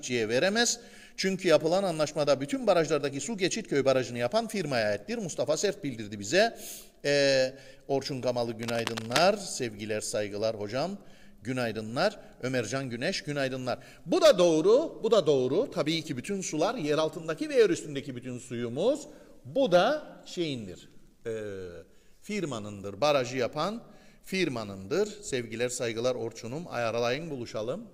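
Cable scratch noise, 8.59 to 9.24 s: dense, ragged rustling just below the sound's level, likely a worn connector whose contact resistance fluctuated.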